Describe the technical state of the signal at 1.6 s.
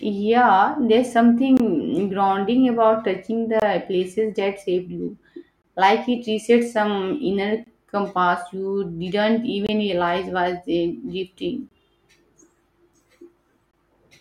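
A gap between chunks sits at 1.57 to 1.60 s, just before "grounding about touching". The audio was delivered in chunks of about 2.0 s, and a short stretch of silence, about 23 ms long, has been left at the join rather than the next chunk following on seamlessly. Nothing is dropped from the speech itself; it is simply paused. It is heard as a brief hole or dip in the sound.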